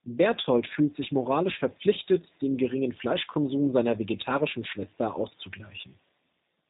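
Right from the start and all the way through, the speech carries G.729 codec damage, and it's plainly audible. Everything above about 3.8 kHz is gone, and the voice sounds slightly rough and synthetic, rebuilt from a filter, pitch predictor and sparse pulses, which fits an 8 kbit/s G.729A stream.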